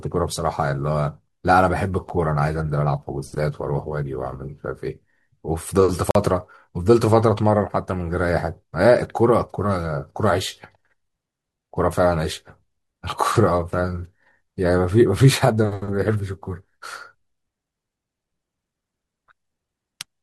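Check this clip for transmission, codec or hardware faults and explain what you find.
Two brief dropouts in this speech come from a gap between stream segments. At 2.09 s a hole of about 9 ms appears, and from 6.11 to 6.15 s one of about 43 ms. Their 4-second spacing matches the segment length. The segment time stamps leave small gaps that the player fills with silence, so no audio is lost. The waveform drops abruptly to a flat line, and a spectrogram shows a sharp-edged blank vertical stripe.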